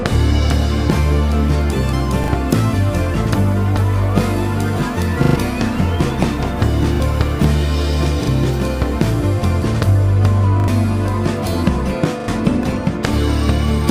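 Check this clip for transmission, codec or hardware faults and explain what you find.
There's a repeated-buffer stutter at 2.24, 5.24, 6.96, 8.24, 10.6 and 12.2 s. Audio arrived late, so a chunk of about 40 ms replayed with hard joins. The repeats sound like brief buzzy stutters, longest at 5.24 s, which loops three extra times and drops about a tenth of a second.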